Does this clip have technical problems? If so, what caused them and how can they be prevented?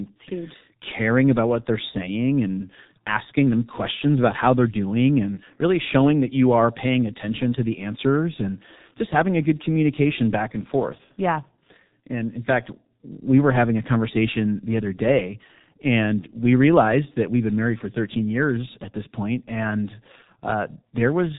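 Yes. The speech has G.723.1 codec damage from start to finish, and it is heavy. Nothing comes through above about 3.8 kHz, so the sound is muffled and boxy. Consonants smear together. The voice has a hoarse, grainy edge. The codec models speech in 30 ms chunks and adapts slowly. At such a low rate, which fits a 6.3 kbit/s stream, fine detail is simply discarded. To prevent it, record or transmit with a wideband codec at a higher bitrate.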